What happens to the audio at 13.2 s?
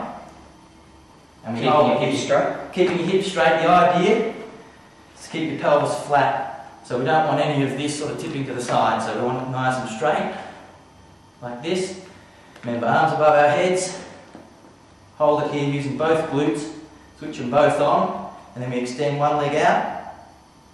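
Nothing goes wrong at 13.2 s. The audio plays through that moment intact, with no audible fault.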